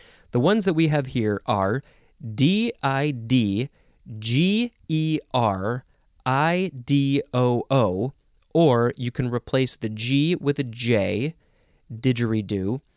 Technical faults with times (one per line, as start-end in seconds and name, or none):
none